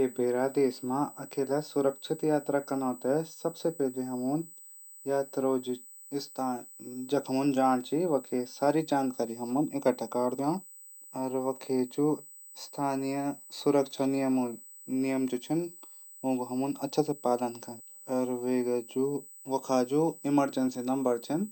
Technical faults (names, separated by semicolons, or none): USB whine